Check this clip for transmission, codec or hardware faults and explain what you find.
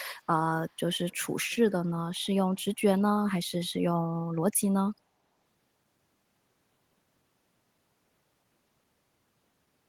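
One fault turns up in this speech: an echo leak from 0.67 to 0.74 s. A very faint, delayed copy of the talker returns about 378 ms late, likely because a far-end echo canceller let some loudspeaker pickup through. That distinct, long delay sets it apart from room reverberation, which blends in continuously.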